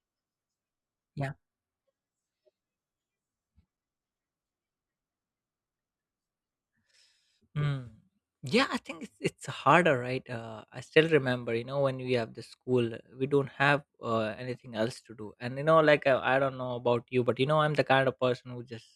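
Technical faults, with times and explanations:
No technical faults are audible anywhere in this speech.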